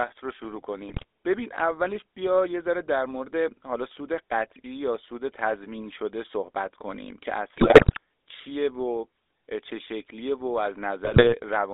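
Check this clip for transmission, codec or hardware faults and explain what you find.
Two transmission faults are present, both from a GSM mobile link.

GSM full-rate codec, throughout: the speech is confined to roughly 300 Hz to 3.7 kHz and has a buzzy, gravelly roughness. The codec rebuilds the voice from a vocal-tract filter driven by sparse, regularly spaced pulses, which fits the 13 kbps full-rate scheme.

GSM bit errors, at 0.88 to 1.05 s, 7.56 to 7.98 s and 11.04 to 11.34 s: the speech breaks into squawks, pops and gargling. Corrupted bits reached the decoder, so damaged filter, pitch or gain values distorted the spectrum or level for those frames.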